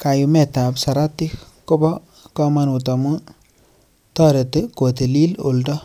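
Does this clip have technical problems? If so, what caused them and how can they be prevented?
No, the speech signal in this clip is technically sound, with nothing that needs diagnosing or preventing.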